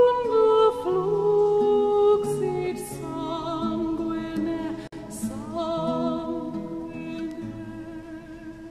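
At 4.37 s and again at 7.31 s, a bit error spike gives a sharp tick. A flipped bit made a sample jump and return, showing as a vertical spike in the waveform and a full-height line across the spectrogram. At 7.31 s the jump spans a few samples. From 4.87 to 4.93 s, a gap at a join of encoded pieces opens a 50 ms gap where separately encoded segments kept their padding. It shows as a flat waveform and a blank spectrogram stripe with smeared edges.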